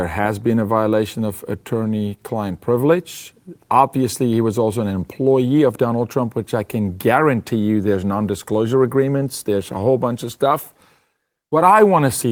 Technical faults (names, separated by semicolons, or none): none